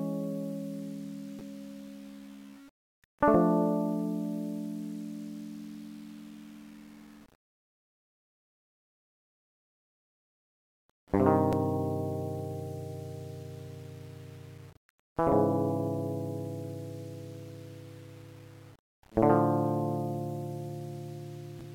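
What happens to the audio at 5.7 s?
At 5.7 s the music carries the same fault heard through the whole clip, low bit depth without dither, grainy on quiet sounds and close to a steady hiss on dense ones. The sound is likely rounded to about 8 bits with no dither, so the error sits roughly 30 dB below the signal and moves with it. Quiet passages turn gritty, unlike the steady, even hiss that dithered low-resolution audio would leave.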